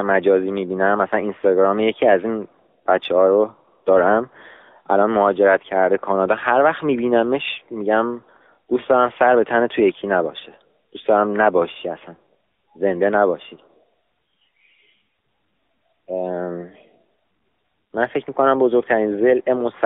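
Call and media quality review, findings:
AMR narrowband mobile codec, whole clip, 0 to end. Speech band-limited to roughly 250 Hz to 3.6 kHz, nothing above, with plainly audible buzzy, synthetic texture from pulse-excited vocal-tract modelling in 20 ms frames. Damage level fits a mid-rate AMR-NB mode near 10 kbps. Unlike a plain analogue telephone band filter, which only dulls and thins the speech, this adds coded roughness and a robotic edge. Probable component: mobile network leg or handset speech encoder.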